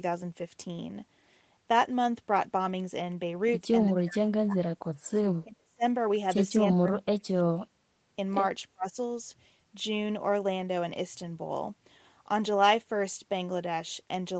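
Speech drops out four times: 3.87 to 4.9 s, 5.44 to 5.83 s, 6.69 to 7.87 s, and 8.73 to 8.96 s. The deepest dips reach roughly 30 to 40 dB. The likely cause is speech suppressed in double talk. The echo canceller mistook the talker for echo and muted it.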